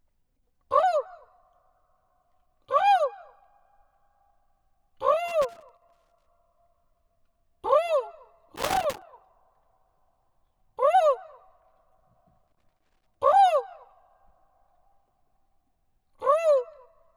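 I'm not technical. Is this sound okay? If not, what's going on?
No. A plug or cable contact somewhere in the chain is worn or dirty, so the connection keeps cutting in and out for split seconds whenever it shifts. That is loose connector crackle: the sound gets chopped up, heard as bursts of scratchy crackling from about 5.28 to 6.26 seconds, 8.56 to 9.02 seconds, and 12.48 to 13.15 seconds.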